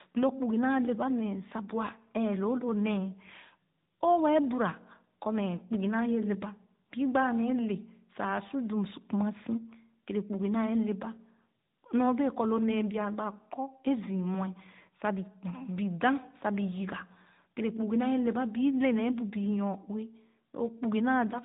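Throughout, tandem speech coding from two successive speech codecs, ending in AMR-NB, makes speech rough, muffled and warbly. A spectrogram shows a hard ceiling at 3.8 kHz.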